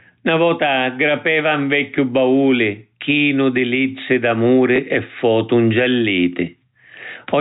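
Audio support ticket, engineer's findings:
Gain pumping, throughout. Gain swings around 10 dB. Likely a fast limiter or compressor reacting to input gain set far too high.

Packet loss with last packet repeated, 4.76 to 4.78 s. A 20 ms gap filled by replaying the previous chunk, which fits a single 20 ms packet. The repeat gives a small blip. The telephone-band G.711 path caps the audio at 4 kHz.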